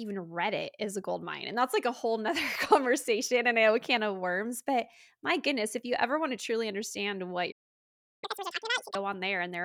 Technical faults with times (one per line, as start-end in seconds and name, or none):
7.51-8.24 playback stall
8.24-8.95 catch-up at higher speed